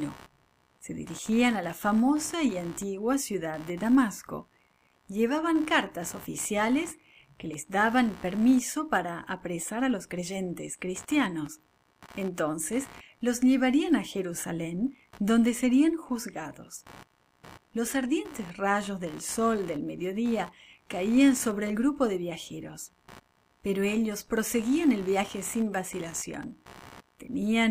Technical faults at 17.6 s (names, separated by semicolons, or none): computer activity noise